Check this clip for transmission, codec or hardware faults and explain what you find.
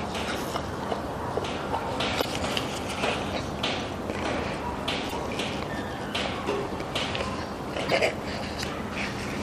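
Damaged data in a compressed stream shows up three times, at 2.18–2.25 s, 5.06–5.13 s and 7.85–7.92 s, each lasting about 70 ms and recurring roughly every 2.8 s. Corrupted bytes make the decoder misread frames and hunt for the next valid header, producing a short chirp or blip. A spectrogram shows brief broadband smears or abrupt vertical streaks, and the waveform shows a sudden discontinuity.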